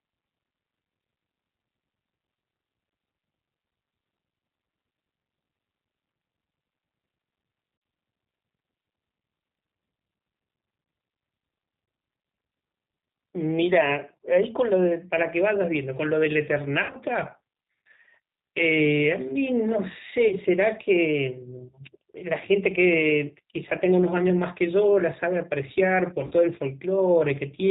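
Throughout, the speech is carried by the G.729 codec at 8 kbit/s, which rebuilds it from a filter and a few pulses, leaving it band-limited, rough and audibly synthetic. VoIP packet loss concealed by the speech codec then strikes at 7.77 s (50 ms), 16.83 s (80 ms lost across 100 ms), 20.28 s (30 ms) and 26.27 s (40 ms). Each time, the decoder stretches the last sound into a fading buzz or coloured noise.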